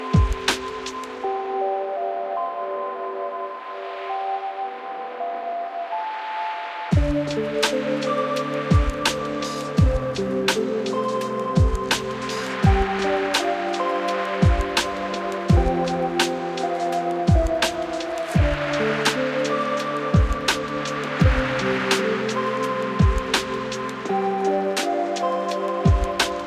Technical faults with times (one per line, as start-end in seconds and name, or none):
none